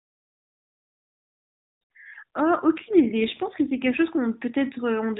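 The speech is carried over narrowband mobile coding, with nothing above 4 kHz and only light coding roughness. From 2.78 s to 4.01 s an AMR rate drop occurs. The codec switches to a lower mode, spending fewer bits on the vocal-tract model and excitation pulses, which fits a step down from 12.2 kbps to about 5.9 kbps. The band stays the same and nothing drops out, but the speech turns buzzier and more synthetic for about 1.2 s before the higher rate returns.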